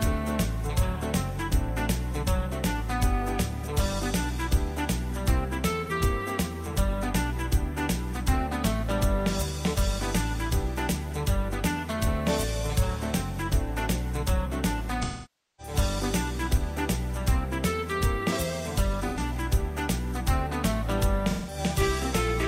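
At 5.85 s (about 43 ms, fitting one lost frame), 15.03 to 15.74 s (about 555 ms), 19.08 s (85 ms) and 21.30 s (171 ms), AAC frame loss with concealment: the decoder rebuilds missing frames from the last good spectrum. The shorter gaps become smeared, noisy patches. The long one decays toward silence and fades back rather than cutting out abruptly like a plain dropout.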